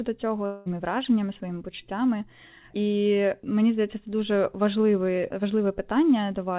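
From 0.46 to 0.68 s, a long network dropout is the likely cause: audio stopped arriving for about 0.2 s, and the receiver filled the gap by stretching the last sound into a fading buzz. Speech returns at "враженнями своїми почуттями" with that stretch missing.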